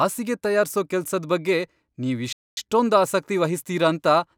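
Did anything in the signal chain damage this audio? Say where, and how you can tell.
Yes. The damage sits at the playback stage. The speech cuts out abruptly at 2.33 s and the output stays silent until 2.57 s, a gap of about 240 ms, before the sound resumes. That is a playback stall: the player stopped delivering samples mid-flow. The likely cause is the output buffer running dry, or the playback thread being blocked, so nothing reached the converter until the player recovered and carried on.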